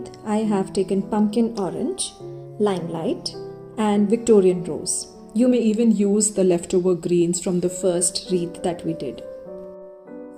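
From 1.59 to 3.28 s the sound runs about 5.9% fast and rises by about 99 cents, roughly a semitone, then snaps back. From 5.51 to 7.83 s it runs 5.9% slow and drops about 104 cents. Each is likely a drift correction step from clock-matching software. On a spectrogram, every harmonic jumps up or down together at the boundaries.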